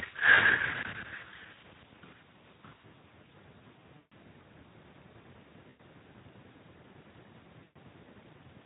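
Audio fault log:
0.35 to 0.41 s, 3.97 to 4.13 s, 5.69 to 5.81 s and 7.63 to 7.77 s, VoIP packet loss concealed by the speech codec: gaps of about 20, 140, 100 and 120 ms where the Speex decoder keeps stretching its last pitch and filter with fading gain. You hear a buzzy or noisy, smeared fade that lingers briefly after packets resume.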